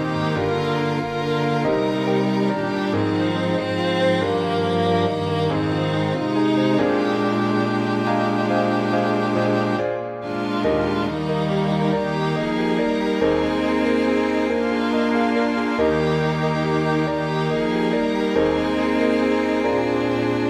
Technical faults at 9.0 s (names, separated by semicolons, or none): dropped samples